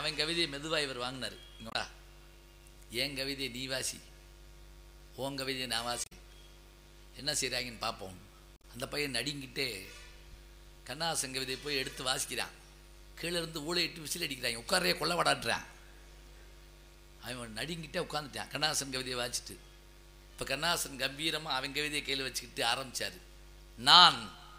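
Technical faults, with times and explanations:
1.69–1.75 s, 6.02–6.13 s and 8.56–8.65 s, damaged data in a compressed stream: three brief disruptions, lasting about 70 ms, 100 ms and 80 ms, where the sound breaks into a chirp, squawk, click or short gap before continuing. At each point, part of the encoded data was lost, overwritten or mixed with foreign bytes. The decoder could not read those frames correctly, lost its place, and resumed only after finding the next valid frame header.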